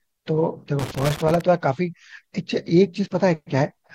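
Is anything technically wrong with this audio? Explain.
Yes. From 0.79 s to 1.41 s the speech is broken up by loose connector crackle. A worn or dirty contact in the signal path is making and breaking as it shifts, so the audio is chopped on and off. It sounds like an irregular scratchy burst. On a waveform it shows as ragged gaps and spikes. A spectrogram shows scattered vertical broadband streaks across that span.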